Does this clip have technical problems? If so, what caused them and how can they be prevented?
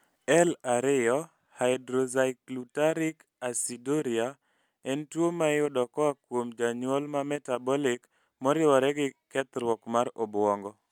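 No, this speech clip has no audible technical problems.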